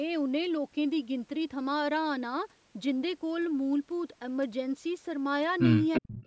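A speech recording carrying two faults in its closing moments. From 5.92 s to the end at 6.26 s, a delayed copy of the speech trails in underneath, roughly 10 dB below the main talker and lagging by about 346 ms. This is an echo leak, likely caused by a loudspeaker on the far end of a call whose echo canceller let part of the picked-up playback through, so the talker's own audio returned a third of a second late. Between 5.99 and 6.09 s, the speech abruptly dips almost to nothing, a drop of around 40 dB lasting about a tenth of a second. This is speech suppressed in double talk: with both sides sounding at once, the echo canceller likely could not tell the local talker from the returning echo and clamped down on both. The call's microphone processing, which also leaves nothing above 8 kHz, is doing its normal job.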